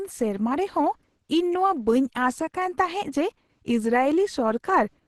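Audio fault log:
throughout: Opus compression, heavy. The speech sounds muffled and hoarse, with a grainy, rough texture on voiced sounds instead of swirling, which fits Opus in its hybrid speech mode at a low rate around 12 kbps, likely the cause. Bands starved of bits are filled with folded or noise-like energy. On a spectrogram, harmonics look smeared into diffuse noise rather than leaving holes. Nothing appears above 22.5 kHz.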